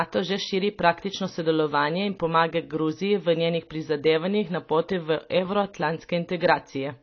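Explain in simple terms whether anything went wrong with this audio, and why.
The speech sounds muffled and watery from start to finish, likely from heavy AAC compression, which cut away everything above 6.4 kHz.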